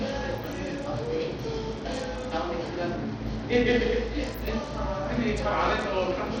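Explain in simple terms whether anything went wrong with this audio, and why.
Something did go wrong, and it lasts for the whole clip. The top end of the sound keeps dropping out and flickering back, and a gritty, grainy noise clings to everything, which points to the likely cause: Bluetooth SBC compression. This simple wireless codec splits the sound into a few broad bands and, when squeezed, starves the highest ones first. A plain treble cut would sound smoothly dull. Here the brightness comes and goes, and the grit remains.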